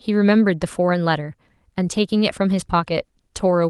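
Nothing here is technically wrong: it's a short bit of speech that has come through an ordinary call link, Opus by the sound of it, with the top end stopping around 12 kHz, and there are no dropouts, glitches or other faults anywhere in it.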